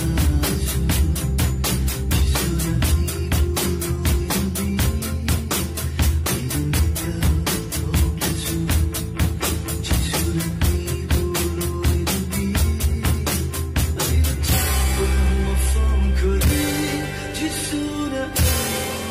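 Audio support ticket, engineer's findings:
Findings: no audio fault identified on listening; no action required.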